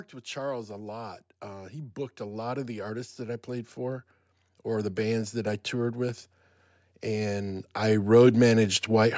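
Speech run through a call's microphone processing, which cuts everything above 8 kHz, and the trouble here is automatic gain rising. From 0.32 to 6.27 s the gain control decides the input is too quiet and slowly turns it up by about 12 dB, so the voice and the background swell together. It happens again, on a smaller scale, from 7.06 to 8.82 s with a further climb of about 4 dB.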